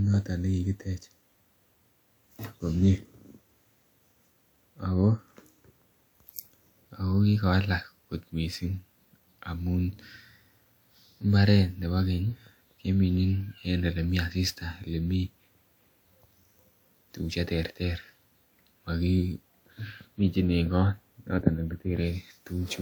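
Throughout the speech, the sound is swirly, hollow and smeared, with blurred consonant attacks, yet content reaches up to about 20.1 kHz. That points to generation loss rather than one low-bitrate pass, likely from roughly three re-encodings with a WMA-like codec near 128 kbit/s.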